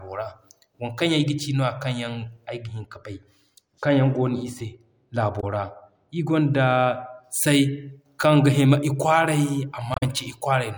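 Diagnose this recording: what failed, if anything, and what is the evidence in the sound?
A treble-cut de-emphasis filter was applied wrongly at the processing stage, from 2.47 to 7.24 s. The response falls smoothly with frequency, to about 13 dB down at 10 kHz relative to 1 kHz, so this stretch sounds dull and muffled.

Damaged data in the compressed stream, at the codec or storage stage, corrupted frames at 5.40 to 5.44 s and 9.92 to 10.03 s. The decoder misread those frames and lost sync while hunting for the next valid header, leaving brief glitches.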